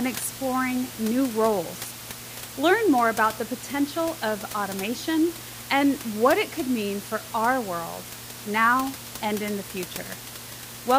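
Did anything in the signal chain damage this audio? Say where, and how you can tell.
No, nothing in the signal chain damaged this audio; the only background is the room's own noise, about 14 dB below the speech.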